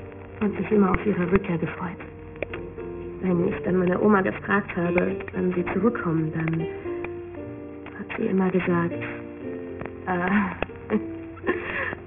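Aliasing runs throughout: content above 3 kHz folded back unfiltered, leaving gritty, metallic tones. A spectrogram shows energy pressed hard against 3 kHz, fitting a 6 kHz resample.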